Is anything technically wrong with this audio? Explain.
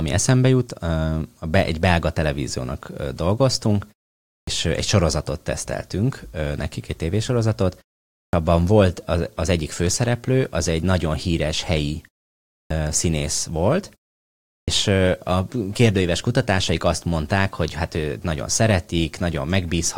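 Yes. At 4.34, 8.19, 12.55 and 14.54 s, a clipped start after a pause: the output device sleeps through each 0.45 to 0.66 s gap, and about 130 to 155 ms of onset is swallowed before the speech resumes abruptly.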